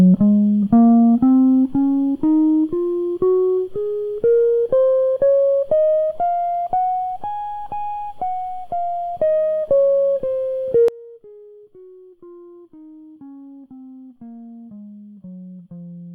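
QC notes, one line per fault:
10.88–16.14 s, one channel inverted: the music drops by about 23 dB, centred parts almost gone, likely because one channel's reversed polarity cancels shared content when summed to mono. Waveform amplitude collapses abruptly.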